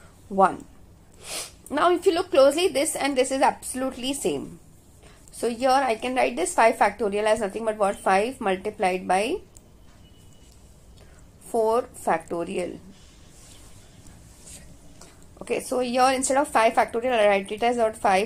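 Nothing in this audio gives away a technical problem, so there's really nothing here to flag.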